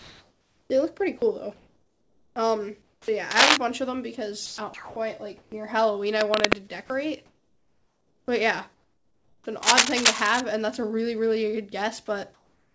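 From 0.00 to 3.08 s the sound is choppy, and about 1.8 s is swapped for flat synthetic hiss. This is likely sound chopped by the voice detector, switching on and off. Between 3.31 and 3.57 s, rough scratching rides well above the sound, likely cable scratch noise from a worn contact being moved. The chopping returns from 4.46 to 5.52 s, with about 0.48 s filled. More scratching follows from 6.20 to 6.56 s, above the sound but quieter than before. From 6.86 to 9.46 s the sound chops again, with about 1.78 s of featureless fill. Scratching recurs from 9.63 to 10.40 s. From 12.34 s to the end, about 0.41 s of background becomes steady, detail-free hiss, about 3 dB quieter. This is likely comfort noise in place of the background after transmission stopped.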